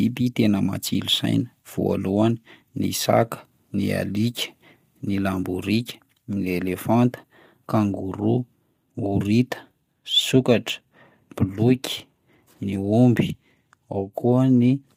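From start to finish the speech carries plainly audible low-delay AAC compression, likely AAC-ELD at a bitrate that sounds near 32 kbps. Its short frames cannot separate the voice's pitch harmonics cleanly, so noise fills the gaps between them and the voice turns rough and grainy. Nothing sounds above about 15.7 kHz. A standard long-frame codec at a similar rate would instead smear attacks with pre-echo or leave watery swirls.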